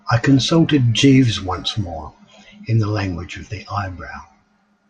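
Speech recording with a Bluetooth SBC bit pool drop from 0.42 to 2.06 s. The treble dulls and gritty noise rises; a spectrogram shows the upper bands thinning to empty, with speckled quantisation noise below. The sound fits a link falling from bit pool 28 to 12, around 96 kbps.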